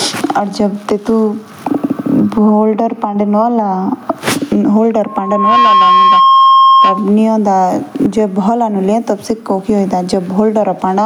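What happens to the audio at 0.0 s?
At 0.0 s the speech is already affected by gain pumping, which runs through the whole clip. The level swing is around 15 dB. Loud and quiet passages sit close together, so the sound feels squashed. The likely cause is input gain set far too high, with a fast limiter or compressor clamping down on every peak.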